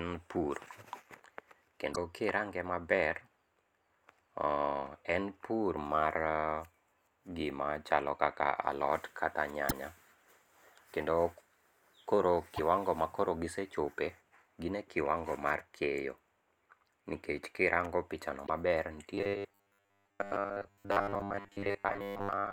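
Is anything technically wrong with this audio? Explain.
Yes. Damaged data in a compressed stream is heard at 1.92–1.98 s just before "kirange maber", at 9.65–9.72 s right after "alot kata", at 12.53–12.60 s just before "makoro gisechope gin e", and at 18.43–18.50 s. Each time, corrupted frames make the decoder lose sync and hunt for the next valid frame, producing a brief chirp or blip about 60 ms long.

Robotic sound from repeated short buffers runs from 19.15 s to the end. Audio arriving too slowly is the likely cause, with the player looping a 10 ms slice over most of that stretch. This locks the sound to a rigid, metallic 100 Hz buzz.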